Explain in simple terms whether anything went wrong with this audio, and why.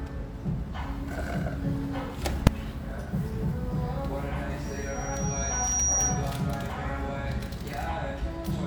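At 2.47 s there is a single sharp bang. This is invalid numbers at full scale. Somewhere in the processing a calculation produced infinite or meaningless values, and the output was forced to its loudest possible setting for a tiny block of about 2.7 milliseconds, a length that fits a 128-sample processing block. A block that short has no room for a gap between pops, so it registers as one loud click.

From 4.64 s to 6.30 s a high, steady whistle at about 5.7 kHz rises over the sound. This is loudspeaker feedback squeal. A microphone was picking up a loudspeaker fed by that same microphone, and at this one pitch each trip around the loop came back stronger than before. The tone grows over roughly a second until it is somewhat louder than the rest of the sound, then stops at 6.30 s.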